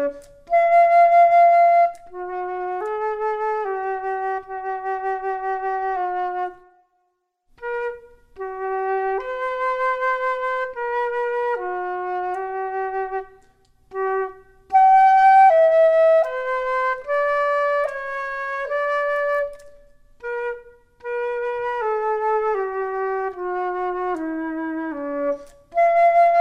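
No faults to report: nothing in the audio marks a point where the capture, processing or playback chain went wrong.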